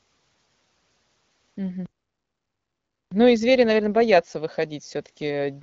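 At 1.86 s the speech cuts to silence for about 1.26 s, resuming at 3.12 s: a playback stall, likely the player starving for data or its thread being blocked.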